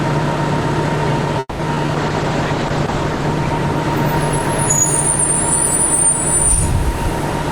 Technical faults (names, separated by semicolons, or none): repeated packet loss (robotic sound); call bitrate drop